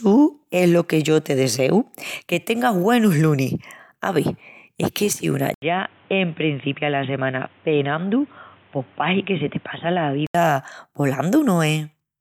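Input switched to a poorer device at 5.54 s, after "es que si una": an 80 ms gap, then dull, boxy speech with nothing above 3.8 kHz, about 5 dB quieter, with new background noise about 30 dB below the speech. The likely cause is a narrower-band microphone. Clarity returns at 10.35 s.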